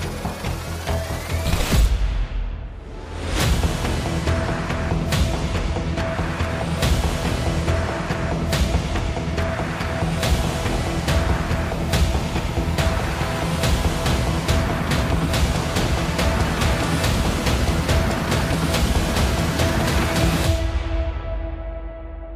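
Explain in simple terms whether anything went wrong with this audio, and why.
Nothing went wrong here; listening all the way through, there's no dropout, glitch or odd noise to point to at any moment.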